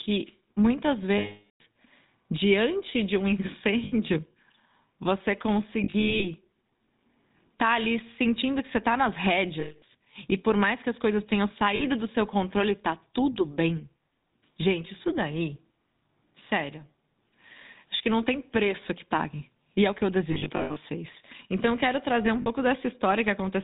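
This is speech run through the GSM full-rate codec the whole way, with plainly audible damage. Everything above 4 kHz is gone, and the voice has that buzzy, gravelly grain you get when the vocal tract is modelled and driven by a sparse, regularly spaced pulse train, which fits the 13 kbps full-rate coder. On top of that there are lost GSM frames. The decoder keeps re-using the last good frame at falling level, so each gap comes out as a rough, metallic ring rather than a clean dropout. The longest is at 1.18 to 1.61 s, about 420 ms, long enough to fade toward silence. Shorter ones land at 3.84 s (80 ms), 9.6 to 9.83 s (220 ms), 11.76 s (40 ms) and 22.42 s (40 ms). At 5.84 to 6.28 s and 20.32 to 20.78 s the losses are scattered, with short runs under a tenth of a second, so the ringing stutters in and out.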